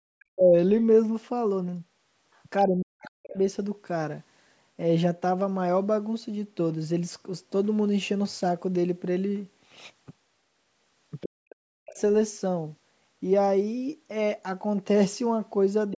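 At 0.2 to 0.25 s and again at 2.34 to 2.41 s, a faint scrap of a second voice sits far beneath the talker, very quiet against the main speech. This is the other side's voice leaking through, likely loudspeaker echo that the echo canceller failed to remove. A louder scrap at 15.91 to 15.95 s stands only about 15 dB down. Unlike a simple level dip, these moments add a separate voice on top of the talker.

At 0.28 to 0.55 s, 2.66 to 3.37 s and 11.23 to 11.99 s, the talker's own speech drops away by as much as 40 dB. This is speech suppressed in double talk, likely the canceller muting everything while both sides spoke. Nothing new is added here, and the talker's voice falls nearly silent.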